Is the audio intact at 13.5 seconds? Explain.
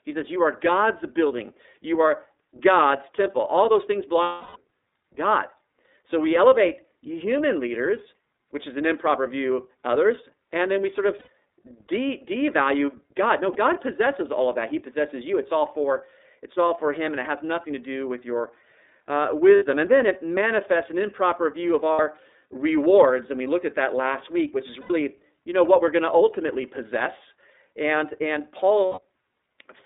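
No. From 13.53 to 13.56 s there are lost iLBC frames. About 30 ms of audio never arrived, a gap that fits a single 30 ms frame. The decoder filled it by repeating the last pitch cycle, blended with noise. You hear a brief held, slightly buzzy tone in place of the real sound. Each iLBC frame is coded without depending on the one before, so the next frame decodes cleanly and the sound recovers almost immediately.

That moment also carries the iLBC codec damage present across the whole clip. The sound is confined to a telephone band of roughly 300 Hz to 3.7 kHz, so nothing above that comes through. The codec models each frame's excitation on its own. The 30 ms framing points to the 13.33 kbps mode. The result is intelligible speech with a plainly audible rough, synthetic edge.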